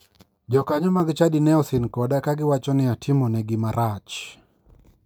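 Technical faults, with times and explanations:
0.0–1.0 s: channel delay (comb filtering). One channel lags by about 10 ms. Mono summing cancels evenly spaced notches starting near 50 Hz. The speech sounds hollow before "chadi ne osin koda".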